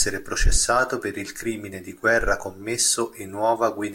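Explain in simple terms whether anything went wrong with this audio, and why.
Nothing went wrong with this recording. The speech comes through without any technical faults to point to.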